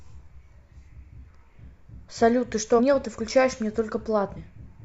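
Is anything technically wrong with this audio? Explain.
Yes. At 2.75 s and again at 4.33 s the speech jumps forward, losing about 300 ms and then about 150 ms. These are compressed frames skipped: whole 42.7 ms frames went unplayed, roughly seven and then four, so the audio skips ahead by their length.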